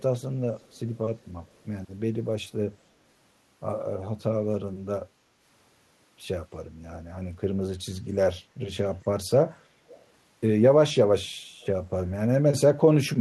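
Three brief echo leaks occur, at 0.59–0.79 s, 9.89–10.0 s and 11.61–11.66 s: a faint copy of the speech returning about 296 ms late, barely audible at first, clearest at 9.89 s. A loudspeaker-side echo canceller likely let residual pickup through.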